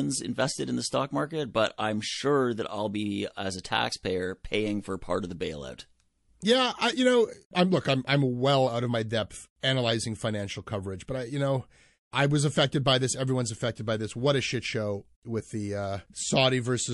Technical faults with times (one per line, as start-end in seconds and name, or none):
0.00-16.93 MP3 compression
9.60-9.63 pre-echo